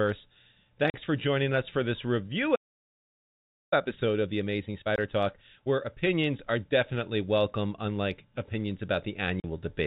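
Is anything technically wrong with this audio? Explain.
Yes. The speech has three kinds of fault.

Packet loss filled with silence occurs at 0.9 s, 4.96 s and 9.4 s. The gaps last 40 ms, 20 ms and 40 ms. Their lengths fit a 20 ms packet size, with one or two packets missing each time. The receiver had nothing to play for those slots and inserted digital silence. Each gap is a short hard hole.

A playback stall runs from 2.55 s to 3.73 s. The speech stops mid-flow for about 1.16 s, then resumes. The likely cause is the player running out of buffered data, or its thread being blocked, so the output fell silent until it recovered. It sounds like a sudden dead pause, not a natural one.

Time-compressed catch-up follows the stall, from 3.73 s to 6.73 s. The player cuts small pieces out of its backlog and cross-fades across the joins. This runs the speech at 1.15 times normal speed. The pitch does not change. 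The delivery sounds hurried. The 20 ms dropout at 4.96 s falls inside this stretch. All of this sits on top of G.711 telephone coding, which caps the audio below 4 kHz.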